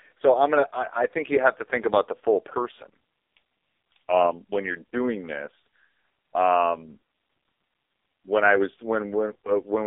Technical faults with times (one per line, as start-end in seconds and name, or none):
0.00-9.87 AMR narrowband mobile codec